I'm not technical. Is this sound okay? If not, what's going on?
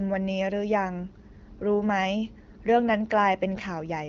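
Yes, it's fine: there's nothing wrong to hear, just speech coming through the way it normally does on an HD Voice phone call.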